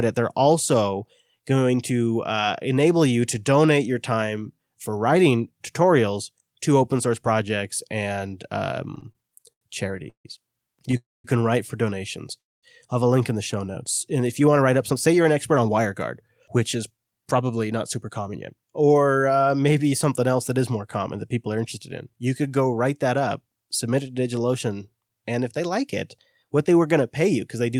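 A speech recording with several network-delivery faults. From 8.95 to 10.27 s there are repeated stalls (stutter): the jitter buffer ran dry twelve times, and the receiver stretched the last sound to fill about 375 ms. That is roughly 29% of that stretch, with the longest hold at 150 ms. The speech drags and hiccups, and a spectrogram shows smeared, frozen harmonic bands repeating between normal segments. At 10.91–10.95 s comes a short stall from a late packet, a 16 ms hold that briefly sustains one sound, visible as a tiny flat smear in the spectrogram. Two call audio freezes follow, at 10.97–11.26 s and 12.38–12.65 s, each heard as a brief buzzy continuation fading into quiet. The first fills 275 ms, 210 ms of it silent. The second fills 244 ms, 230 ms of it silent. On a waveform both look like a short decaying tail followed by a near-flat gap. The likely cause is packets held up in transit, with playback resuming where it stopped. 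Finally, from 14.40 to 19.47 s, a jitter buffer speed-up removes around 0.4 s of audio in many pitch-period snips to cut the built-up delay. The speech runs at about 109% speed with unchanged pitch and sounds hurried, and the spectrogram shows syllables compressed closer together with no shift in harmonic spacing.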